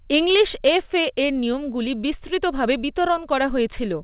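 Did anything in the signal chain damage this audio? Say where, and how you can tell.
Yes. There is clock drift between sender and receiver: the sender's clock runs roughly 4 percent fast, so the jitter buffer keeps overfilling. This is a buffer-stage fault, and it sounds like faint, unevenly spaced timing hiccups through the whole speech clip.

To hold latency down, the receiver makes repeated timing corrections from 0.06 to 3.96 s, trimming short pieces so playback runs at about 104 percent. These cuts all go one way and fall at irregular spacing, heard as a slightly hurried, unsteady tempo over the G.711 A-law call's band-limited sound, which stops at 4 kHz.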